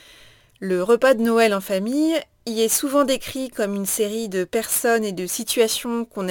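Speech with crude rate conversion running throughout: a gritty, inharmonic fizz trails the louder and brighter syllables, around 20 dB below the speech. The pattern fits 44.1 kHz material pushed to 48 kHz by repeating nearest samples without filtering.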